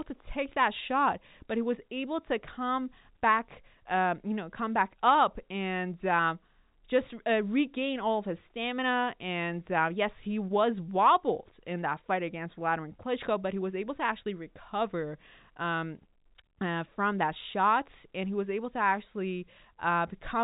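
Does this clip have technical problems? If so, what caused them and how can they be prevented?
No technical faults found.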